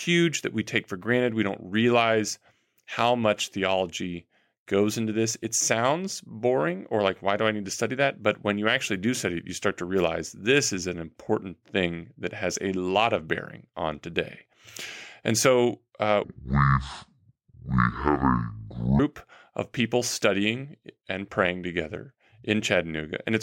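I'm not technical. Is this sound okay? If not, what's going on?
No. There is a section at the wrong speed from 16.24 to 18.99 seconds. For those few seconds the speech plays at about 0.57 times its normal speed, so it drags and the voice drops by roughly ten semitones, sounding deep and slow. Speed and pitch shift together because the audio is being read out too slowly. The likely cause is that this part was played or edited against the wrong clock.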